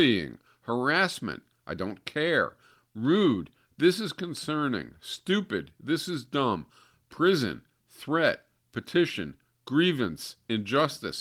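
No technical faults can be heard anywhere in the recording.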